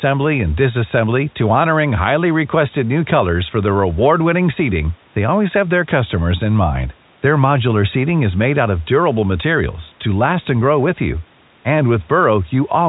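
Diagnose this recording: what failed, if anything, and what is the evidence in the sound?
Nothing in the chain has failed: the speech carries the narrow telephone band and the faint level-following grain expected of G.711 A-law coding at 64 kbps, the call microphone processing has only trimmed the lowest bass, and the room noise sits about 37 dB below the speech.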